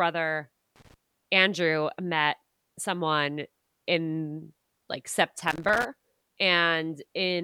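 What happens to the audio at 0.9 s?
At that point you're in a short burst of loose connector crackle, about 0.76 to 0.94 s: a worn contact briefly making and breaking, chopping the speech into scratchy, irregular crackle.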